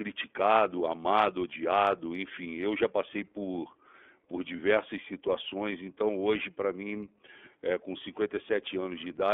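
iLBC codec coding runs through the whole clip: the audio is held to roughly 250 Hz to 3.4 kHz, with plainly audible rough, synthetic coloring from independently coded 30 ms frames.

Lost iLBC frames occur at 4.56 s, after "já passei por por", and at 7.25 s, after "então hoje para mim". Each gap fits one missing 30 ms frame, which the decoder fills by repeating the last pitch cycle. The result is a brief buzzy held vowel, with the voice right again almost at once.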